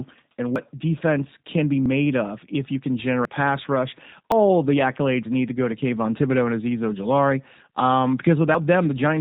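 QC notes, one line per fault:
Throughout: G.729 codec. The speech has been squeezed through a low-rate speech coder that rebuilds each 10 ms frame from a vocal tract filter, a pitch predictor and a few pulses, which fits G.729A at 8 kbit/s. The damage is plainly audible. Nothing passes above about 4 kHz, so the sound is narrowband and muffled, and the rebuilt excitation gives the voice a rough, slightly synthetic edge.
0.56 s, 1.86 s, 3.25 s, 4.32 s, 8.55 s: dropped buffer (overrun). The likely cause is the capture side falling behind, so the hardware overwrote a block before it was read and the audio on either side was spliced directly together. Each point is a forward jump with no gap. Most losses are short, around 50 ms, but the one between "of if you can" and "pass rush" is nearer 150 ms, and the one between "pass rush" and "the accolades need to" is about 100 ms.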